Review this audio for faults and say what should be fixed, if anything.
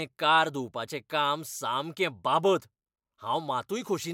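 Nothing here needs fixing, as the speech signal shows no technical faults at any point.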